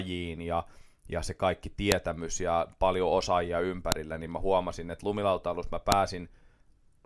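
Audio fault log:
1.92, 3.92 and 5.92 s: file header played as audio. Stream pieces 2.0 s long were joined with their WAV headers intact, so each header's bytes play as samples. The result is a sharp snap after "ja ja se kaikki", after "ja paljon osaajia", and after "huomasin että lumilautailussa mä". Each shows as a thin waveform spike and a vertical broadband stripe on the spectrogram.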